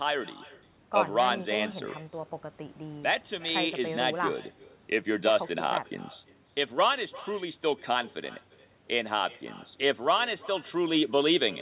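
Throughout, an echo with no canceller trails the speech by roughly 300 ms at about 22 dB down: the far end's loudspeaker feeds its microphone, returning a faint, thin, band-limited copy.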